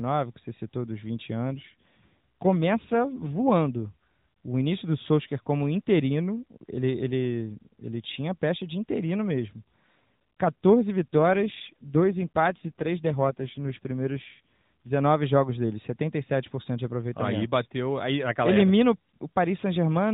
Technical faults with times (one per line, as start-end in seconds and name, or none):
1.47-3.52 AMR rate drop
11.13-14.91 AMR rate drop